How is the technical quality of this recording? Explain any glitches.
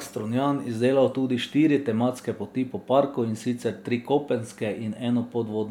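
No technical glitches can be heard anywhere in the recording.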